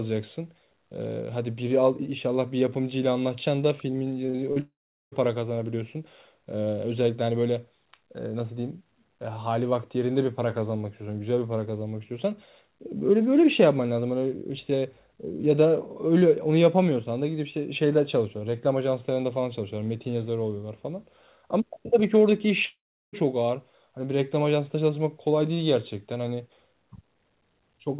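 From 4.26 to 4.58 s the sound turns choppy and robotic. This is repeated packet loss: four gaps, the longest 39 ms, were patched by stretching the preceding audio, so about 37% of the span is concealment. From 4.60 to 5.14 s, and again from 22.66 to 23.15 s, a fading buzz or hiss gives way to silence lasting about 0.4 s and then 0.37 s, and the audio resumes with a piece missing. Both are likely long network dropouts, where roughly half a second of audio never arrived. Throughout, the narrowband telephone-style sound with nothing above 4 kHz comes from the call path.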